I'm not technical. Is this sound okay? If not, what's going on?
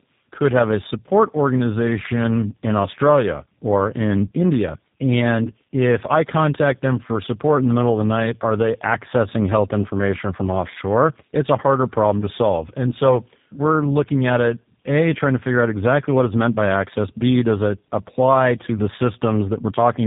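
No. Throughout the speech sounds rough, muffled and warbly, with nothing above 3.8 kHz. This is tandem speech coding: the call passed through two different phone-network speech compressors in a row, and each one roughened what the previous one had already degraded.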